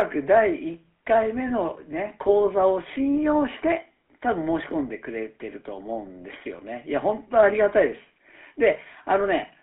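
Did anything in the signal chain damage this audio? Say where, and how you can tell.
Yes. GSM full-rate codec damage at the codec stage runs throughout. The speech is confined to 250 Hz to 3.4 kHz with a plainly audible buzzy, gravelly roughness. That fits a 13 kbps GSM coder rebuilding the voice from a vocal-tract model driven by sparse, regularly spaced pulses.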